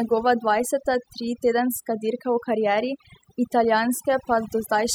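From start to finish you can hear overdone noise removal. The denoiser was pushed too hard, so any frequency band sitting near its noise estimate gets dropped, quiet speech detail included. The background drops and breaks up into twinkly specks.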